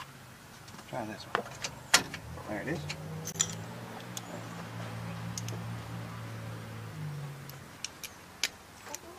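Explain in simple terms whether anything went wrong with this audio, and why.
Around 3.32 to 3.35 s there's a gap at a join of encoded pieces: a 24 ms dropout where separately encoded chunks were stitched together with their leftover start and end padding, before the sound picks up where it stopped.

From 7.77 to 8.68 s everything runs about 6% slower and drops just over a semitone. That's likely a drift correction step, clock-matching software abruptly changing playback rate.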